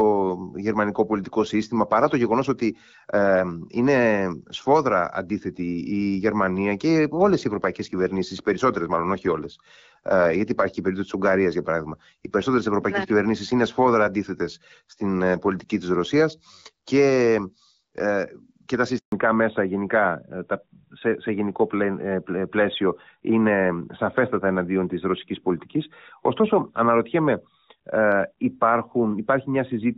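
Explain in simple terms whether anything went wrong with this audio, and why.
Two things went wrong. At 18.98 s there is a handover gap: the call switched between networks and no speech arrived for 140 ms, so the voice drops out abruptly until 19.12 s, and whatever was said in that moment is lost.

Right after that, at 19.12 s, comes a fallback to narrowband. The call left HD Voice for an older phone codec, so everything above 4 kHz is gone until the end, and the voice sounds duller and rougher than before.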